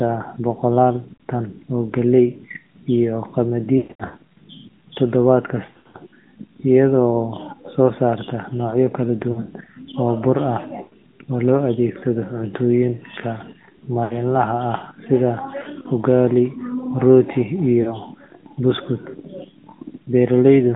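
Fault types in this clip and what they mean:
AMR narrowband mobile codec: The speech passes through a narrowband mobile speech coder at 10.2 kbps, which rebuilds each sound from a pulse-driven vocal tract model. It sounds plainly buzzy and synthetic. A spectrogram shows energy confined to roughly 150 Hz to 3.5 kHz, with a flat ceiling and nothing above it.
Lost AMR speech frames: When frames go missing, the decoder keeps repeating the last pitch and vocal tract settings while lowering the gain. Losses of 40 to 60 ms sound like brief dips or warbles. The worst spot is 3.64 to 4.22 s, where 300 ms is lost and the sound stretches and fades. This shows as smeared, held harmonics and shrinking waveform amplitude.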